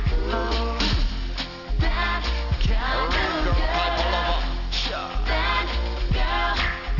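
Aliasing runs throughout the clip: the sound fits a drop from 48 kHz to 12 kHz with no anti-alias filter, so content above 6 kHz folds back below it as unrelated tones, fairly strong at about 15 dB under the signal. High detail turns gritty and metallic, with energy crowding hard against the 6 kHz band edge.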